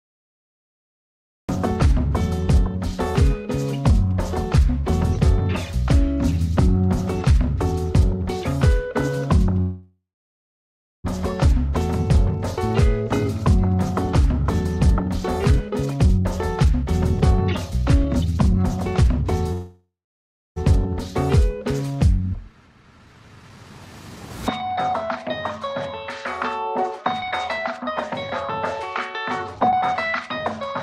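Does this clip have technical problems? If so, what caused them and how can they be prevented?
Yes. There are three kinds of fault.

Cut-off start: the clip holds digital silence from 0 to 1.49 s. The sound then begins abruptly, mid-event, with no natural attack. Recording or streaming started late. Start capture before the source begins, or add a short pre-roll.

Call audio freeze: at 9.61 to 11.06 s the last sound is stretched into a fading buzz, then about 1 s of silence. At 19.53 to 20.58 s the same happens, with about 0.64 s of silence. Nothing is lost afterwards. About 1.43 s and 1.04 s of delay are added. The likely cause is packets held up in transit, which emptied the jitter buffer. A steadier network path with less congestion, or a larger jitter buffer, prevents it.

Jitter buffer speed-up: the sound runs faster at unchanged pitch after each freeze. It plays at 114% from 14.75 to 19.23 s, cutting roughly 0.7 s. 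It plays at 109% from 22.30 to 26.01 s, cutting roughly 0.4 s. It plays at 114% from 26.83 to 27.92 s and at 113% from 28.60 to 30.74 s. The receiver trims short pitch-period pieces to shed the built-up delay. Preventing the freezes removes the need to catch up.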